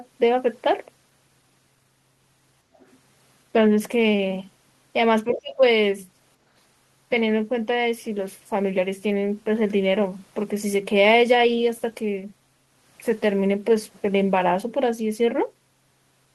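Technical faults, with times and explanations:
2.75–2.97 s, other side's voice leaking through: a faint second voice sits well under the speech, likely loudspeaker echo that the canceller didn't fully scrub from the mic.
5.31–5.61 s, speech suppressed in double talk: the talker drops away sharply for about a third of a second, likely because the canceller couldn't separate overlapping voices and turned everything down.
5.32–5.39 s, other side's voice leaking through: a short scrap of the far voice, only about 15 dB under the speech, pokes through during that overlap, likely residual echo slipping past the canceller.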